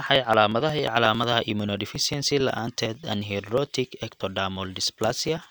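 From 0.06 s to 5.37 s the speech carries periodic USB or driver dropouts, recurring every 0.09 s, around seventy in all. Each time, something blocks the USB bus or audio driver and roughly 10 ms of audio is skipped outright rather than filled with silence, so the waveform jumps across the gap. The result is a steady train of ticks and small pops, audible only while there is signal.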